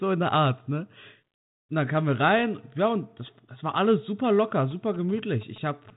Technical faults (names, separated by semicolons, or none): GSM signalling bursts